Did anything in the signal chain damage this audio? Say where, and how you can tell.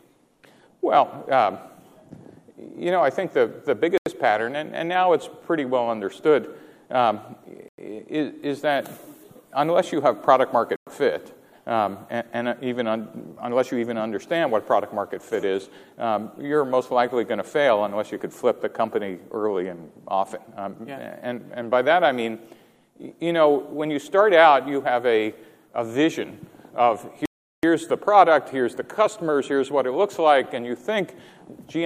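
Yes. Clean silences open at 3.98 s (85 ms), 7.68 s (98 ms), 10.76 s (108 ms) and 27.26 s (377 ms). This is likely a Bluetooth stall in playback: delayed wireless packets starved the receiver's buffer. These are true gaps, not the smeared, noisy patches a codec error leaves.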